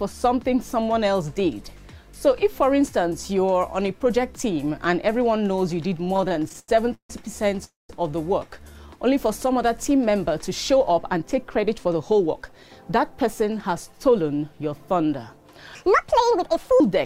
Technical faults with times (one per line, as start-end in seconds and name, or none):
6.04-7.10 repeated stalls (stutter)
7.64-7.90 call audio freeze
10.80-13.38 jitter buffer speed-up
15.75-16.80 section at the wrong speed